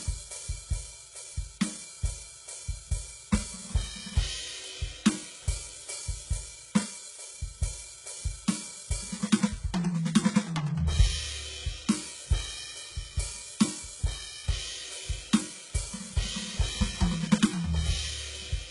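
From start to finish the music has a bright but synthetic top end: cymbals and other high detail sound gritty and metallic, with nothing at all above about 11.1 kHz and heavy codec damage throughout. This is likely HE-AAC compression at a very low rate, around 12 kbps. Only the lower spectrum is truly coded, and the treble is rebuilt by copying lower bands upward under a coarse envelope, so its harmonics no longer line up with those below.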